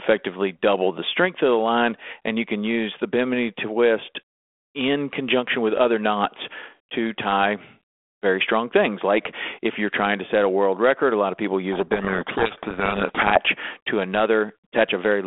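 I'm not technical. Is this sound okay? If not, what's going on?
No. From 11.72 to 13.41 seconds the speech is buried under harsh, grinding distortion, then snaps back to normal. This is a codec payload misread. The phone-style codec in use sends each sample as a small code, and for that stretch the receiving end read those codes with their bits in the wrong order. The result is harsh distortion over the speech, not silence. A cheap or low-quality line would hiss all the way through. This starts and stops abruptly.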